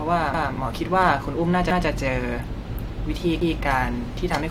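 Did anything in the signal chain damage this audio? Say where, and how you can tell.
Yes, at the driver or buffer stage: a repeated buffer. New audio missed its deadline, so the device replayed its last block once more. From 0.34 to 0.51 s a roughly 171 ms piece of speech sounds twice with a hard join, which fits an 8192-sample buffer. Essentially no audio goes missing.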